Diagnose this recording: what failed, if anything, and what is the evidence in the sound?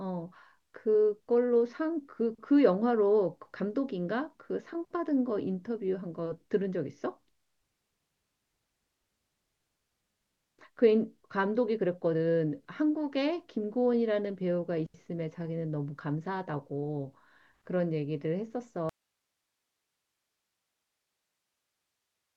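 Audio dropout to a faint residue at 18.89 s, lasting to the end: speech cuts abruptly to hiss roughly 55 dB down, likely a broken analogue feed.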